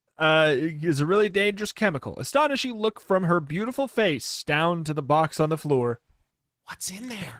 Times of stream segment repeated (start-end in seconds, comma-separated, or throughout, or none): none